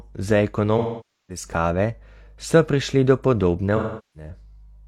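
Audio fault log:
0.78–1.44 s and 3.76–4.30 s, AAC frame loss with concealment: about 0.5 s and 0.4 s of stream lost (fitting roughly twelve and nine frames). The decoder repeats the last spectrum with scrambled phase, so speech smears into phasey noise that decays. Spectrograms show harmonics blurring into a fading haze, and waveforms show the envelope sagging, then recovering.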